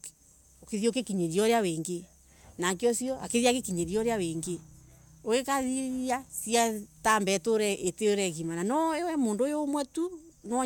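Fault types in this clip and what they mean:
Nothing here needs flagging; the speech comes across without any problems a listener would notice.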